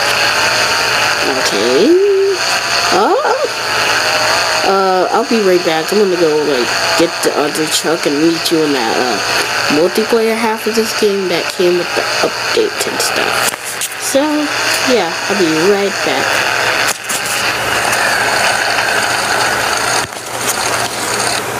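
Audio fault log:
Throughout, gain pumping: the gain is pulled down under each loud sound, swinging by around 15 dB, likely from excessive gain driving a fast limiter.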